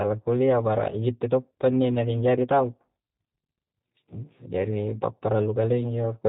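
From the first moment the speech carries G.729 codec damage, and it is plainly audible. Everything above 4 kHz is gone, and the voice sounds slightly rough and synthetic. That happens because the codec models each 10 ms frame with a vocal tract filter, a pitch predictor and a few pulses rather than keeping the waveform. A simple band-limit would only muffle the sound. Here there is also a buzzy, artificial texture, which fits a low-rate coder around 8 kbit/s.

From 1.08 to 2.59 s hard clipping is added. The signal is driven about 5 dB past what the chain can pass, so its peaks are cut flat. This is heard as crackle on the louder syllables. Codec roughness stays even across the whole clip, but this distortion comes and goes with level. It is also confined to that stretch, and its flat-topped peaks add harmonics.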